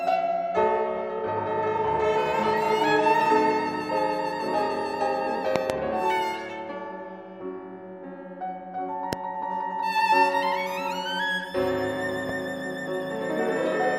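Loud pops, likely voltage transients from a plug or switch, strike at 5.56–5.72 s (a double pop), 9.13–9.15 s and 12.29–12.32 s. They stand well above the sound, showing as waveform spikes and vertical broadband spectrogram stripes.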